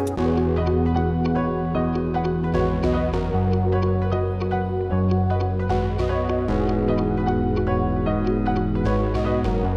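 No technical faults are audible.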